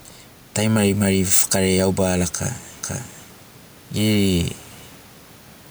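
Gain pumping runs through the whole clip, with the level swinging by about 5 dB, likely from excessive input gain hitting a fast limiter. From 2.83 s to 4.43 s a doubled audio track appears, with a full-band copy roughly half a second behind and about 5 dB quieter. It starts and stops abruptly and has no room decay, likely from a second, slower capture path.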